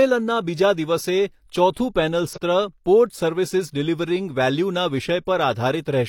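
Speech clip with compressed frames skipped at 2.33 to 2.38 s: about 150 ms of audio vanishes, consistent with roughly three 43 ms frames.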